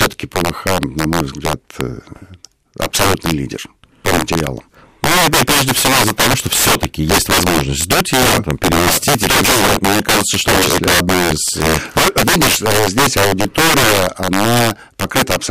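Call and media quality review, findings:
Integer overflow throughout the speech: cracks on loud peaks as the gain stage runs about 7 dB over and wraps sign. Waveform shows peaks flipping full-scale; spectrogram shows broadband vertical streaks.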